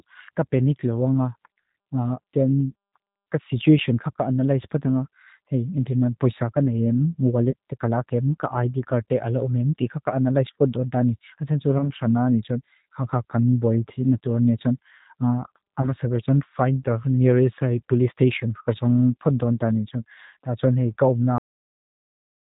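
The whole clip has passed through the G.729 codec at 8 kbit/s, which rebuilds speech from a coarse vocal model, so it sounds band-limited below 4 kHz, rough and plainly synthetic. VoIP packet loss concealed by the speech codec occurs at 7.51 to 7.54 s, 11.78 to 11.90 s and 15.82 to 15.91 s, each consistent with a single lost 20 ms packet. The decoder stretches the last sound into a brief buzzy or noisy, fading smear, and the speech stays weakened for a moment afterwards. Finally, a cut-off end at 21.38 s: the last buffers were never played, so the speech stops mid-sound and drops straight into digital silence.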